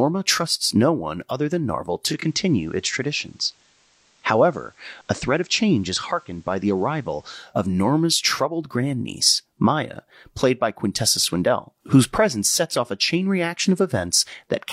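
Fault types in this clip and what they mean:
Digital radio blending to analogue: the radio crossfades to FM for a while, adding faint hiss and dropping about 1 dB.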